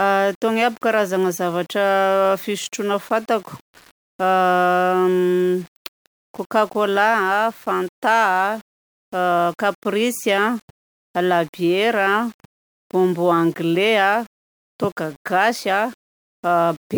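Right through the speech there's grainy, signal-following grit, and the quietest bits drop out or sputter; likely low bit depth without dither, about 7 bits rounded, error roughly 30 dB down.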